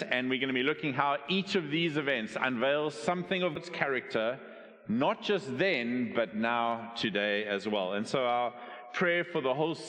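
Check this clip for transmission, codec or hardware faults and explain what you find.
One fault stands out: damaged data in the compressed stream, from 3.55 to 3.58 s. Corrupted bytes there make the decoder misread frames and lose sync until it finds the next valid header, producing a brief glitch. A spectrogram shows a short broadband smear; the waveform shows an abrupt discontinuity.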